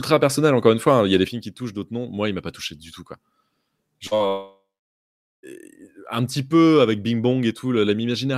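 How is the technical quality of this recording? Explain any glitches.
The recording has clear technical problems: a permanent drop in level early on, then a cluster of network losses around 4 to 5.5 s.

At 1.28 s, just after "y a des", the speech and its background noise fall together by about 8 dB in an instant and stay at that lower level to the end. This is a sudden gain jump. The abrupt, unramped step most likely comes from a gain setting or digital scaling change applied between one sample and the next, rather than from the speaker moving away.

From 4.07 to 4.14 s there is a brief smear where the sound seems to wobble for a moment. That is short concealed packet loss. About 40 ms of audio failed to arrive in time, and the receiver bridged the hole for roughly 37 ms by extending the preceding sound before blending back into the real signal.

Right after that, from 4.15 to 4.23 s, comes a burst of packet loss. 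Around 40 ms of consecutive audio went missing, and the receiver stretched the last sound and faded it for about 46 ms. The speech then picks up slightly further on, with that small piece gone.

From 4.28 to 5.46 s the sound trails off as the last sound is stretched and fades, and then into about 0.8 s of near silence before the speech returns, skipping well over a second of content. This is a long network dropout, likely caused by a stall in the connection. Concealment spans the whole gap of roughly 1.15 s, but after it fades out only silence remains until the real audio resumes.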